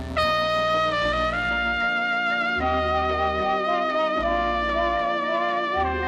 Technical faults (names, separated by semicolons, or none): mains buzz